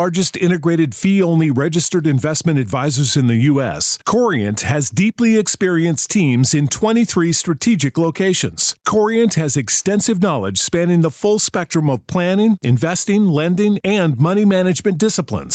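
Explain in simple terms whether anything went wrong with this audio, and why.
Gain pumping runs through the whole speech clip, from the first second to the last. The likely cause is a microphone level set far too high, with an automatic limiter yanking it down on every loud sound. A noise gate would cut the background to silence in the pauses.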